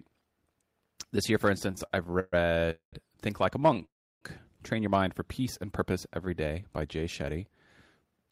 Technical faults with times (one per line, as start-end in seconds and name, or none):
1.71-2.34 repeated stalls (stutter)
2.70-2.94 call audio freeze
3.60-3.83 repeated stalls (stutter)
3.85-4.23 call audio freeze
5.40-6.26 jitter buffer slow-down
8.04-8.27 jitter buffer speed-up